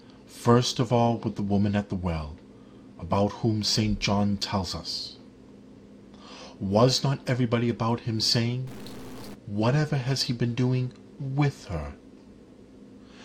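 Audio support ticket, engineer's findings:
Stuck bit, 8.67 to 9.34 s. Likely a broken data line or converter bit held fixed; about half the samples offset by a step of around -40 dBFS, following the waveform. Heard as distortion across that span.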